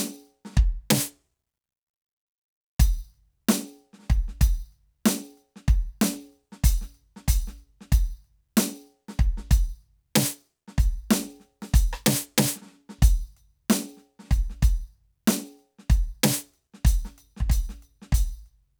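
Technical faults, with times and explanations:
No technical faults detected.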